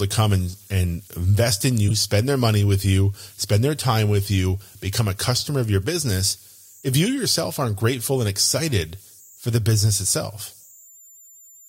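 A delta-sigma converter running without dither has settled into repeating bit patterns, so converter idle tones sit under the whole speech recording: a faint whistle around 7 kHz, about 32 dB below the speech, most audible in pauses and as grainy noise beneath quiet syllables. Separately, a damaged compressed frame was decoded and played anyway. Between 1.88 and 1.91 s, after "and and invest in" and before "spend their money with", a single corrupt frame decoded with misplaced energy produces a short chirp-like burst peaking near -10 dBFS.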